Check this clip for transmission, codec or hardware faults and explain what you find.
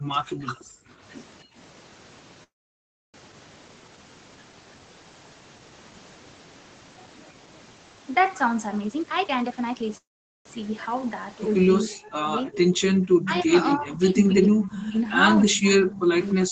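Several faults from a call path can be heard in this speech: gating, two freezes, a speed-up, double-talk suppression and echo leaks.

Background gated by the echo canceller: from 0.0 to 0.89 s the room sound sinks away, by as much as about 40 dB at its deepest, for about 0.7 s in all. Around 1.44 to 1.55 s it dips again by about 24 dB. The echo canceller was clamping the microphone while the loudspeaker side was active, and it released the background when it let go.

Call audio freeze: from 2.43 to 3.16 s the sound stalls. A brief tail hangs on, then about 0.67 s is near-silent, and the audio resumes exactly where it stopped with nothing skipped. The same happens from 9.97 to 10.47 s, about 0.48 s filled and mostly silent. The likely cause is delayed packets draining the jitter buffer, so the receiver padded the wait and each freeze adds delay rather than losing audio.

Jitter buffer speed-up: from 8.81 to 9.97 s the speech runs at about 140% speed but keeps its normal pitch, so it sounds rushed. 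Roughly half a second of audio was trimmed out in small slices, each a pitch period or a few long. The receiver was working off surplus buffered audio to bring its delay back down.

Speech suppressed in double talk: from 11.85 to 15.1 s the talker repeatedly sinks, loses brightness or breaks into fragments, by around 30 dB at worst and for about two seconds in total. From 15.48 s to the end it is pushed down again, by about 40 dB. Both sides were likely talking at once, and the echo canceller, unable to tell the talker from the loudspeaker echo, attenuated everything.

Echo leak: from 13.06 to 13.48 s a faint copy of the voice trails it by 291 ms, around 15 dB below the speech. From 15.94 to 16.32 s it returns at the same delay, around 20 dB down. The likely cause is a loudspeaker on one side whose echo canceller did not fully remove what its microphone picked up, so part of it was sent back.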